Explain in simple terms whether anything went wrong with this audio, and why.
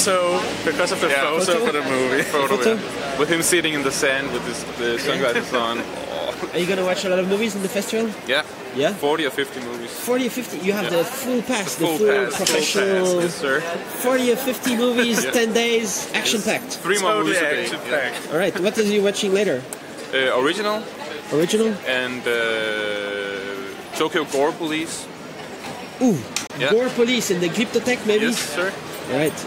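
A brief hole in the sound opens at 26.47 s and closes at 26.52 s. About 23 ms of audio is simply missing, and playback picks up further along. This is a Bluetooth dropout, likely caused by a wireless packet arriving too late to play.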